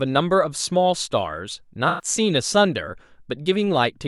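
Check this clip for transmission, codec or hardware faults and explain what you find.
One codec fault: AAC frame loss with concealment from 1.88 to 2.05 s, roughly five frames' worth of audio. The decoder patched the gap by reusing the last good spectrum with randomised phase, so the speech turns briefly smeared and noisy instead of dropping out.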